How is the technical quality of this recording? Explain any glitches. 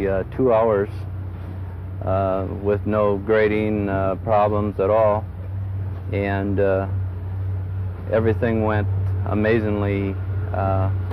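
No glitches or technical faults can be heard anywhere in the recording, so there is nothing to explain.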